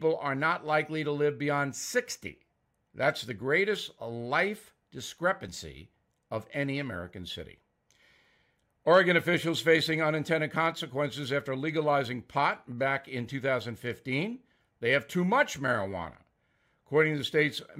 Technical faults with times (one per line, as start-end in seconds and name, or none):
5.48 overlap between stream segments
11.46 overlap between stream segments